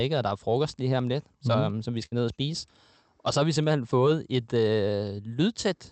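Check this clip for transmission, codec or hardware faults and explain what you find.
One transmission fault stands out. At 2.05 to 2.14 s, between "som mhm som vi" and "ned og spise", the speech smears into a brief fading buzz. This is a burst of packet loss: the receiver stretched and faded the last sound, then skipped ahead.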